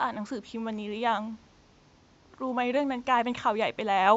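No technical faults can be heard in the speech, and the only background is the room's own ambient noise, sitting about 37 dB below the speech and belonging to the recording itself rather than to the signal chain.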